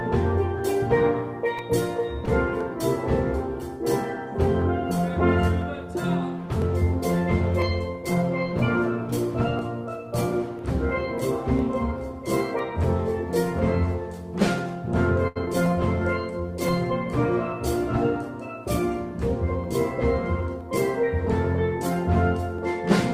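First thing you'll catch is a short stall from a late packet around 2.25 to 2.29 s. A packet didn't show up on time, the jitter buffer ran dry, and the receiver held the last bit of sound for about 17 ms until the packet came in, then carried on from where it stopped. Nothing's lost. It's just a tiny hitch where the sound hangs a touch too long.

The same thing happens again at 15.28 to 15.38 s. This time the held sound stretches for 81 ms, long enough to hear a brief frozen hold with a slight buzz or dip before things pick back up. The whole stream ends up 81 ms further behind.

Right after that, at 15.46 to 15.48 s, there's a short concealed packet loss. About 20 ms of audio never made it to the decoder, so the receiver patched the gap by extending the previous sound and blending back into the real stream. It comes across as a quick smear or wobble.

Last, from 19.57 to 20.69 s, there's a jitter buffer speed-up. 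The buffer was holding more than it wanted, so the receiver trimmed tiny pitch-period slices over and over, about 70 ms in total. Playback runs at roughly 105% speed with the pitch unchanged, so that stretch sounds slightly rushed.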